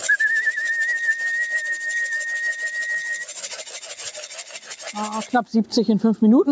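From start to finish, a noise suppressor designed for speech is acting on material it was not built for. It reads the steady, sustained parts of the sound as background noise and pulls them down, while onsets pass through largely intact. Held portions and decaying tails are cut by roughly 10 dB, so the level pumps and flutters and the body thins out between attacks. The top end stops at 8 kHz as expected after call microphone processing.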